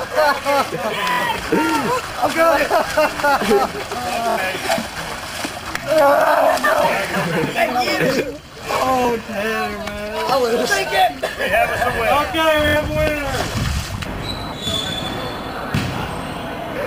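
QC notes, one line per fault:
1.12–1.20 s, 4.30–4.39 s, 12.68–12.77 s: Bluetooth stutter. In each of these three spots, incoming data stops arriving in time, so the receiver loops its last short slice of audio over and over until new data catches up. About 70 ms is affected each time, which fits roughly three lost packets of about 23 ms each. That gives a brief mechanical buzz. The sound then picks up further along, as though it had kept playing through the gap.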